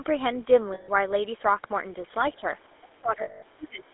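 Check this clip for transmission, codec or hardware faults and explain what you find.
Several transmission faults affect this speech clip: GSM coding throughout, two frame dropouts, echo-canceller suppression during double talk, and a faint leak of the far-end voice.

GSM full-rate codec, throughout: the vocal tract is modelled and driven by coarse pulse excitation, consistent with 13 kbps full-rate GSM. The voice sounds buzzy and gravelly, band-limited to roughly 300 Hz to 3.6 kHz.

Lost GSM frames, 0.74 to 0.89 s and 3.22 to 3.43 s: missing frames were concealed by repeating the last good frame. About 140 ms and 200 ms of sound turn into a rough, metallic ring.

Speech suppressed in double talk, 2.36 to 2.43 s and 2.80 s to the end: the echo canceller, likely confused by both sides talking at once, turns the voice down. It dips slightly at first, then by around 25 dB in patches over about a second.

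Other side's voice leaking through, 2.63 to 2.75 s: echo cancellation left residue from the loudspeaker, likely a second voice. It is a very faint scrap, roughly 40 dB below the talker.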